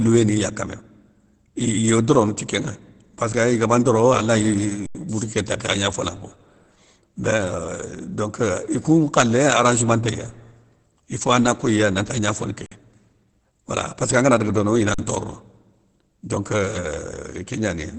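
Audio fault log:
throughout, likely Opus compression: The speech sounds muffled and hoarse, with nothing above about 8.3 kHz. This fits Opus in its SILK speech mode at a very low bitrate.
4.86–4.95 s, 12.66–12.72 s, 14.94–14.99 s, underrun with held sample: The sound freezes flat for 85, 52 and 43 ms, the last right after "angana daga dono ina". Playback then resumes where it stopped, so each freeze ends softly.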